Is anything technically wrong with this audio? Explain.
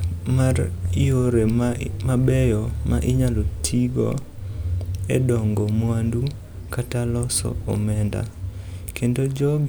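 No, nothing technically wrong can be heard in this speech recording. There is no fault here to explain.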